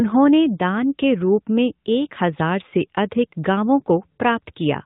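Speech throughout sounds thin, boxy and buzzy, with nothing above 4 kHz; AMR narrowband mobile codec damage, plainly audible, fitting AMR-NB's 10.2 kbps mode.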